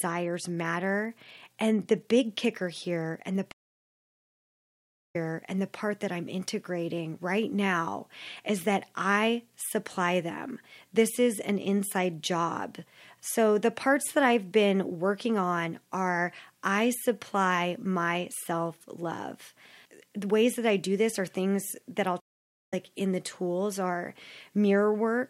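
At 3.52 s, after "kicker here and the", a stream reconnect cuts the sound to silence for 1.6 s. It resumes at "that I'm integrating right" about 0.63 s earlier than where it stopped, so a stretch repeats as the server resends. At 22.20 s, after "are things that I'll", a 0.49 s gap leads to "in the tools are" roughly half a second further on, with material lost. Unlike a dropout, the restart lands elsewhere in the stream.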